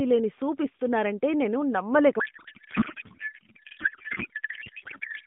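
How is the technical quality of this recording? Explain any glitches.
The first part is clean narrowband AMR phone audio, band-limited to roughly 150 Hz to 3.6 kHz with light codec colouring that fits the 12.2 kbps mode. From 2.20 s to the end, just after "లేని సూప్ ఇస్తున్నారంటే నేను", there is a codec payload misread. The sender appears to pack AMR frames octet-aligned while the receiver parses them as bandwidth-efficient. Every field lands in the wrong place, so the speech turns into garbled, warbling noise that barely tracks it.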